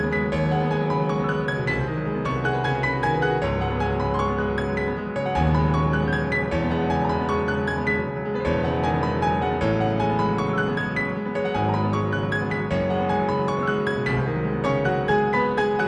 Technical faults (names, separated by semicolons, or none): clock slip clicks